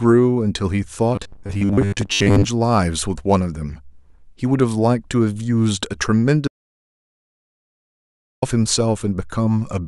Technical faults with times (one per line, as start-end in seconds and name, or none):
1.15-2.44 robotic sound from repeated short buffers
6.48-8.42 audio dropout to silence